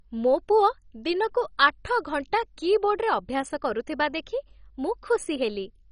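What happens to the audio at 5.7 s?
MP2 compression damage is present at 5.7 s, as it is across the whole speech clip. The likely cause is MPEG Layer II coding at a very low rate, which fits about 32 kbps. Starved of bits, the encoder switches off the upper sub-bands entirely, so nothing survives above about 10.4 kHz, and it quantises the remaining bands coarsely. The result is a dull, band-limited sound with a heavy gurgling, granular roughness.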